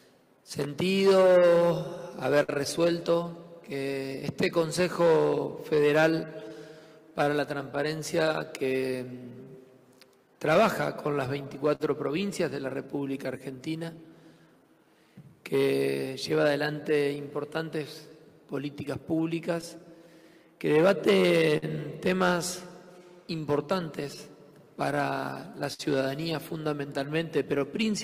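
A faintly unsteady tempo runs through the whole clip. This is clock drift between sender and receiver: the sender's clock runs a few percent slow, so the receiver's buffer keeps draining. From 1.10 to 27.6 s, repeated timing corrections stretch the sound, which plays at about 97% speed and gains well under a second overall. These are small, uneven hiccups, all in the same direction.

At 2.43 to 2.50 s, a sound hangs briefly with a slight buzz or dip. This is a short stall from a late packet: the buffer ran empty and the last sound was held for 53 ms until the packet arrived.

From 7.10 to 11.82 s come scattered short gaps, about ten brief ticks and smears. Lost or late packets were each patched by continuing the previous sound, none for more than a few tens of milliseconds.

Between 16.42 and 19.64 s there are a few more, about four ticks, each very short.

At 21.57 to 21.64 s another held sound with a slight buzz or dip marks a second short stall from a late packet, filled for 52 ms.

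Between 24.03 and 25.81 s, about three scattered short gaps leave smears, the longest roughly 50 ms.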